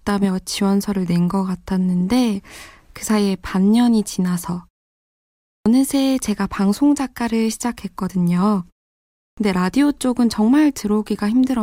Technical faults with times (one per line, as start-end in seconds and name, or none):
5.60-5.66 clipped start after a pause
9.32-9.37 clipped start after a pause